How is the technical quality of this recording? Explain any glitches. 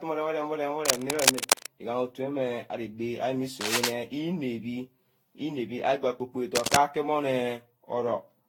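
The quality is fair at best: the speech has a worn, processed character the whole way through, and three scratchy noise bursts cut across it.

The constant issue sounds like generation loss, likely from the audio being decoded and re-encoded something like fifteen times with a lossy codec. The texture points to Vorbis at around 70 kbit/s. Each new encoding quantises again on a slightly different frame grid, so the errors pile up. You hear it as a swirly, hollow smear with softened consonant attacks, rougher than one pass at that bitrate would give. There's also nothing above about 19.5 kHz.

Cable scratch noise shows up at 0.85–1.67 s, 3.61–3.91 s and 6.55–6.77 s. Each burst is roughly 5 dB louder than the speech, so it sits on top of the speech rather than under it. That's dense, uneven crackle and rustle, likely from a worn cable or connector being moved. Its contact resistance jumps around rapidly while it's disturbed, which throws ragged bursts of noise into the signal for those moments.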